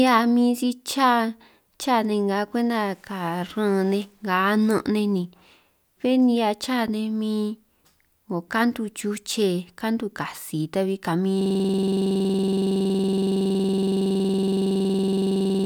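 From 11.41 s to the end, the speech gives way to a system hang loop. The driver or machine froze while the audio hardware kept replaying its ring buffer, so one 46.44 ms fragment repeats about ninety times, which fits a 2048-sample buffer. At 21.5 Hz it sounds like a coarse, rattling buzz. Unlike a stutter from buffer underruns, the repeats are exactly identical and perfectly regular, and the speech never resumes.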